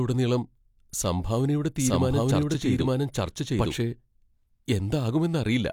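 A doubled audio track runs from 1.78 s to 3.74 s: the speech is heard twice at once, with a second full-band copy trailing the original by about a second and sounding about as loud. The lagging copy has no reverberant tail or room colouring, and it cuts in and out abruptly at both ends. The likely cause is the same signal being captured a second time through a slower path and mixed back in.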